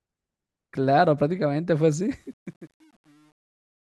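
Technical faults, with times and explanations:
1.93–3.97 s, truncation distortion on a fade: as the fade-out starting around 2 s drops toward silence, the level is cut to coarse steps without dither, consistent with about 9 bits. From 2.29 s to the end, the tail turns gritty.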